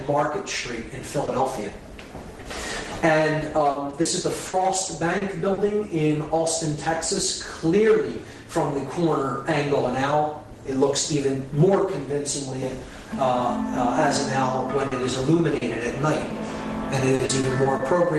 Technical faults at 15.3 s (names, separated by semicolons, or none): repeated packet loss (robotic sound)